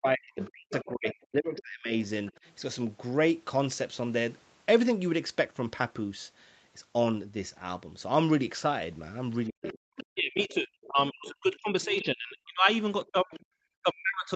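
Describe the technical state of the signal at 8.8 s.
At 8.8 s the speech is intact, with no fault present at that moment.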